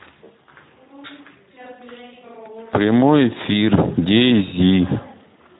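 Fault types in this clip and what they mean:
Speex codec: an old CELP voice codec squeezing this speech to about 11 kbps, so it comes out plainly noisy and hoarse throughout.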